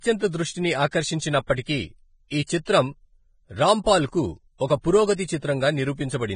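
Throughout the speech, the treble stops sharply at 9.7 kHz and the upper band sounds hissy and grainy, with roughened tones and smeared consonant attacks. This is likely heavy Vorbis compression at a low bitrate, coarsely quantising high-frequency detail into noise-like residue.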